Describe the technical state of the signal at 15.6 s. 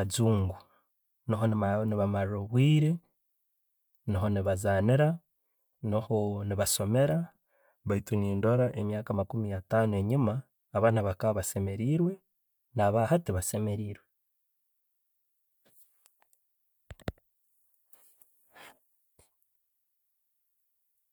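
At 15.6 s the speech signal is intact, with no audible technical fault at that moment.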